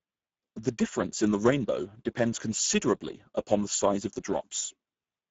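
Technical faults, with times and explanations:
Throughout, Speex codec: the speech went through Speex at a low-to-middle setting, around 10 kbps, which leaves too few bits for the excitation. That makes it plainly noisy and hoarse, and nothing is heard above about 7.7 kHz.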